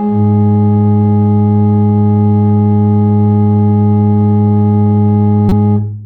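Near the end of the music, from 5.49 to 5.52 s, a corrupt frame is decoded: damaged bits in about two compressed frames are played anyway, misplacing energy into a loud blip. A spectrogram shows a brief burst of energy at the wrong frequencies; the waveform shows a sharp spike.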